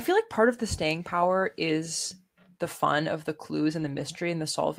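Just after "fun of the clues", from 3.79 to 4.01 s, a lost packet rebuilt from error correction leaves rougher, noisier speech without a gap.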